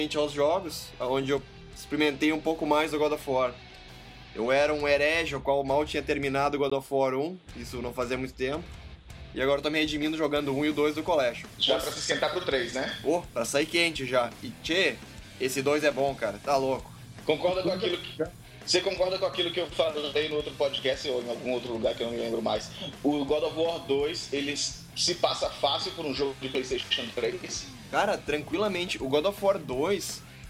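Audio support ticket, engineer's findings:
Block of digital silence, 6.70 s: hard cut to zero for 16 ms and back, no fade, heard as a short hole. Probable cause: output buffer not filled in time. Second block of digital silence, 18.86 s: same mechanism, only about 4 ms, so it comes across as a single tick rather than a gap. Differs from driver dropouts: isolated, irregular spacing, inserted silence instead of missing audio.

Periodic USB or driver dropouts, 24.56–28.54 s: around three ticks, evenly spaced every 1.99 s, each losing around 10 ms. Probable component: USB bus or audio driver blocked by a background task on a fixed timer. The audio is skipped rather than zeroed, so each tick is a splice jump with no hole, and the strict regular spacing separates it from the random silent blocks.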